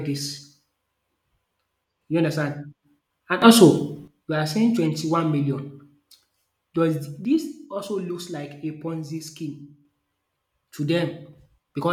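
A speech clip with two sudden gain jumps: from 3.42 to 4.08 s, just before "we are saying", everything, background included, leaps up about 11 dB, then from 7.25 to 9.85 s it drops about 6 dB. It's likely a gain setting applied instantly, with no ramp.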